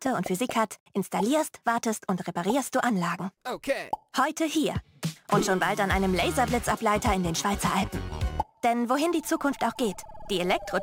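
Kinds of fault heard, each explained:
Crude rate conversion, throughout: the sample rate was raised by a modest ratio, which fits a 44.1 kHz to 48 kHz change, by simply repeating the nearest existing sample instead of filtering. Those duplicated samples recur in a fixed pattern set by the two rates, producing shifted, inharmonic copies of the sound itself, roughly 25 dB below it. The result is a gritty, inharmonic fizz that rides along with louder and brighter passages.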